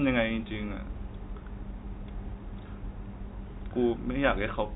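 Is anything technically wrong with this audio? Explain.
No, nothing technically wrong can be heard here.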